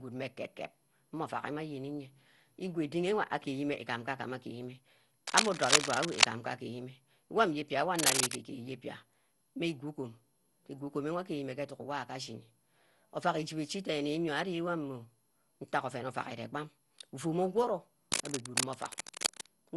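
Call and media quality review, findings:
Generation loss, whole clip. Speech swirly, smeared and hollow, consonant attacks blurred, no content above 11.8 kHz. Likely cause: repeated lossy transcoding, consistent with an MP2 chain at about 96 kbit/s re-encoded something like fifteen times, each pass quantising on a shifted frame grid so noise and spectral holes stack. Distinguished from a single low-bitrate encode: degradation heavier than 96 kbit/s alone would give.

Cable scratch noise, 5.27–6.29 s, 7.96–8.36 s, 18.12–19.46 s. Dense, irregular scratching and rustling laid over the speech, about 5 dB above it in the first two bursts, roughly level with it in the last. Likely cause: worn cable, connector or control being moved, contact resistance fluctuating fast. Distinguished from codec artefacts or clipping: the bursts are uneven, independent of speech loudness, and confined to these windows.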